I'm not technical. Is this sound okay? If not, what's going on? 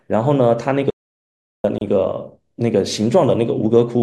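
No. Two separate problems affect this speech.

First, an audio dropout to silence. The recording likely lost its input for a moment, perhaps from a loose connection or an accidental mute, while the recorder kept writing blank audio. From 0.90 to 1.64 seconds the speech stops dead for about three quarters of a second. Even the background sound of the room vanishes, and whatever was said during that stretch is gone for good.

Second, a gap at a join of encoded pieces. The recording appears to have been saved in chunks about two seconds long and then stitched together without trimming the small stretch of blank padding each chunk carries at its edges. At 1.78 seconds a tiny hole of about 31 milliseconds opens in the speech. It is very brief, with blurred edges, and the speech picks up exactly where it left off.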